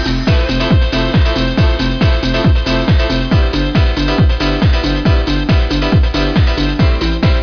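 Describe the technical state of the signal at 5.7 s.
At 5.7 s the signal is intact, with no dropout, clipping, distortion or other audible fault at that moment.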